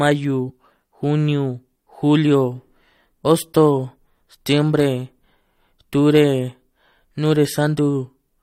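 At about 0.49 s and again at about 3.24 s, the speech is broken by damaged data in a compressed stream. Corrupted bytes leave the decoder unable to read those frames, so it loses sync and hunts for the next valid header. Each event is a brief chirp or blip. On a spectrogram it shows as a thin vertical smear of garbled energy, and on the waveform as an abrupt discontinuity.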